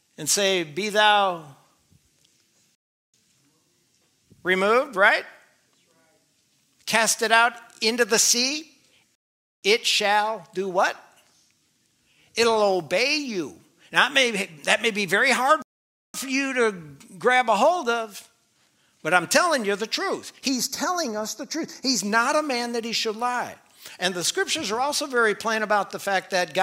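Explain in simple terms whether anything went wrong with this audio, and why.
Three times the sound suddenly drops into silence and then picks up exactly where it left off, with nothing skipped: at 2.75 s for about 0.39 s, at 9.15 s for about 0.48 s, and at 15.62 s for about 0.52 s. These are rebuffering stalls. The player ran out of downloaded audio and had to wait for more to arrive.

From 20.48 s to 22.00 s the sound turns hollow, as if heard through a tube. This is comb filtering from a channel delay. One side arrives a tiny fraction of a millisecond late, and when the two sides are mixed together, parts of the sound cancel, starting around 3 kHz.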